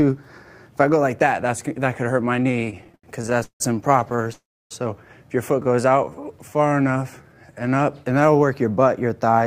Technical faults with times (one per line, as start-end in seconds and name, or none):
2.51-3.62 repeated stalls (stutter)
4.00-4.31 repeated stalls (stutter)
4.33-4.73 call audio freeze
5.63-7.92 jitter buffer slow-down